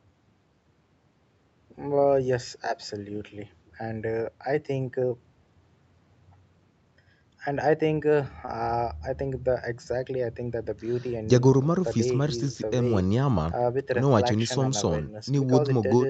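At 8.45 to 8.49 s there is a short concealed packet loss. About 20 ms of the call arrived too late to decode. The receiver patched the gap by extending the preceding sound, then blended back. It is heard as a brief smear, with the call path's cut-off near 8 kHz.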